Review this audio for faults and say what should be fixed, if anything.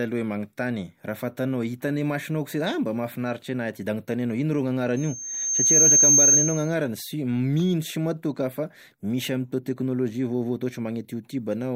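A piercing 6.4 kHz whistle swells over the speech in under a second, from 4.96 to 6.75 s: loudspeaker feedback squeal, where the microphone re-amplifies its own loudspeaker until that frequency runs away, ending up around 10 dB above the speech. Fix it by lowering monitor gain, moving the microphone away from the loudspeaker, or notching 6.4 kHz.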